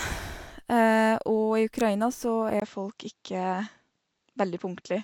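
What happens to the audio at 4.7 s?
At 4.7 s you're in the middle of what sounds like an input switched to a poorer device. From about 2.60 s to the end, the speech loses everything above 7.7 kHz, so it turns duller and boxier. There's a brief 20 ms gap right at the changeover, and a faint new noise floor sits well below the speech, though the level barely moves. It's likely the system swapping to a narrower-band microphone or headset mid-recording.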